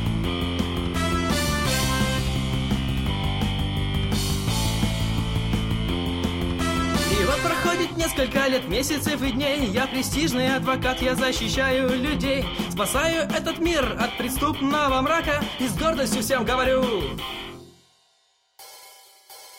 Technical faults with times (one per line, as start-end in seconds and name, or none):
none